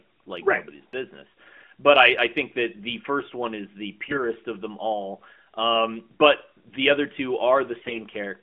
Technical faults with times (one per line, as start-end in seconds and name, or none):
4.08-4.21 AMR bit errors
7.80-7.99 AMR bit errors